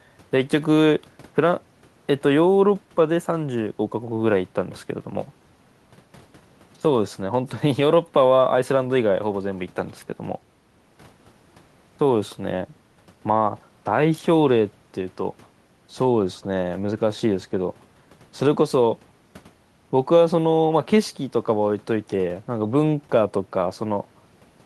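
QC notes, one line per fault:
Nothing stood out on listening to this speech clip.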